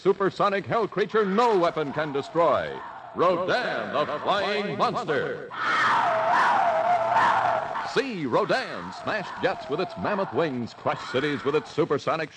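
No technical faults can be heard anywhere in the audio, and the signal stays steady and intact throughout.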